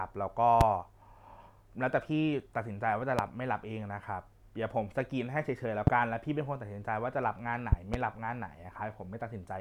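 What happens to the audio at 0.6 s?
A loud pop from 0.61 to 0.64 s, far above the speech: a single sharp thump, likely from a voltage pulse, with the speech carrying on underneath rather than dropping out.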